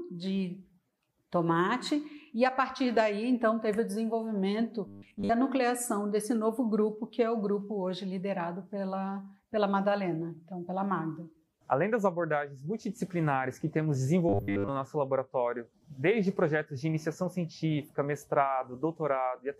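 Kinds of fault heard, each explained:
Robotic sound from repeated short buffers, 4.87–5.30 s and 14.29–14.70 s: the sound turns into a rigid metallic buzz at 100 Hz. This is likely caused by audio arriving too seldom, so a slice replayed to fill the gap, which fits 10 ms, replaces most of the real audio.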